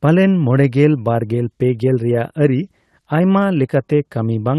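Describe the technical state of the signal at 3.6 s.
At 3.6 s the speech falls within a stretch of small skips where a sliver of sound goes missing. This comes from repeated timing corrections that run from 0.07 s to 4.49 s, with playback pushed to about 104% of normal pace. The receiver keeps trimming short pieces out of the stream, always in the same direction but at irregular spacing, so each cut is tiny and heard, if at all, as a minor stumble.

The root is clock drift between sender and receiver, present throughout the clip. The sender's audio clock runs roughly 4 percent fast, so samples arrive quicker than the receiver consumes them and its jitter buffer keeps filling up. To keep the delay from growing, the receiver must drop material, which produces the recurring small cuts running through this stretch. The Opus call path carrying the audio, with its top end limited to about 12 kHz, is separate from these timing edits.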